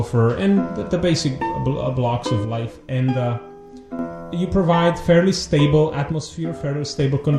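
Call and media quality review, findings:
Music, two abrupt level dips: 2.45–3.99 s and 6.12–7.00 s. Level falls by about 6 dB, then snaps back. Likely one channel drops out upstream of a mono downmix. With one side gone, material shared by both channels sums at half amplitude, and anything panned only to the lost side vanishes for the duration. Worth checking the stereo feed or the capture path for an intermittent channel.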